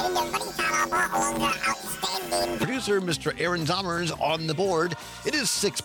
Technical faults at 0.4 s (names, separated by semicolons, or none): planar audio read as interleaved